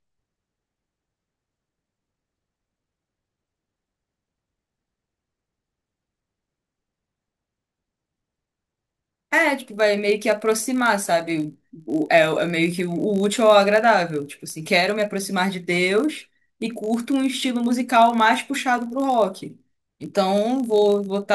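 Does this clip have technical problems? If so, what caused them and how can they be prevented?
Yes. A steady buzz at 50 Hz runs through the whole speech clip. It rises and falls with the level of the voice. This is a filter restarted on every block. The filter drops its stored state at each block boundary and begins again from silence. Each restart leaves a tiny transient. Fifty of these per second fuse into a buzz, which fits blocks 20 ms long. To prevent it, carry the filter's state from one block into the next.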